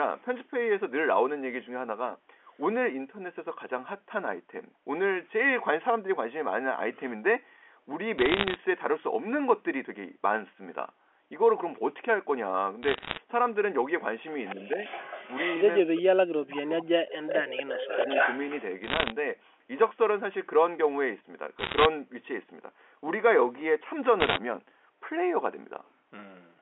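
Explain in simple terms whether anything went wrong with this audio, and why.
Short bursts of sharp ticks and crackle over the speech at 8.18–8.56, 12.83–13.17, 18.84–19.12, 21.59–21.86 and 24.20–24.38 s are bit errors on a digital phone line: flipped bits each corrupt a single sample.

A delayed second copy of the voice, about a quarter second behind, comes back at 14.45–15.82, 16.49–16.71, 17.27–17.36 and 17.6–18.63 s, growing from faint to quite strong. This echo leak is likely the far end's loudspeaker sound slipping past its echo canceller.

The talker's own voice dips at 14.55–14.78 s, then drops almost to nothing at 15.83–16.47 and 16.76–18.08 s. This is speech suppressed in double talk, likely the echo canceller muting everything while both sides spoke at once.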